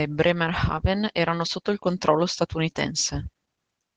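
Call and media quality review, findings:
Opus voice compression, whole clip: speech plainly muffled and a bit hoarse, faint robotic edge. Sounds like hybrid mode, SILK below 8 kHz, CELT layer on top, excitation coded coarsely. Damage fits roughly 16 kbps, 20 ms frames.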